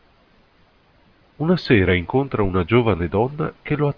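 Nothing in this bit of speech points to a technical fault, so there's nothing here to flag.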